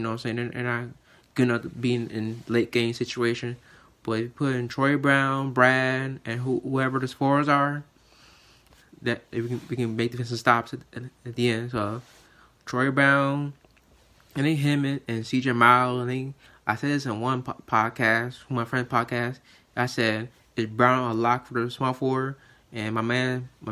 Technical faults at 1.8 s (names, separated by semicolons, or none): none